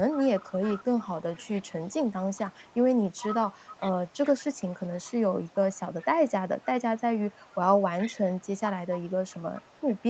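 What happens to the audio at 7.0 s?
At 7.0 s you're hearing an echo leak, running through the whole clip: a faint copy of the speech trailing about 0.42 s behind, well below the main level. Likely a loudspeaker on the far end whose echo canceller let some of its pickup slip back.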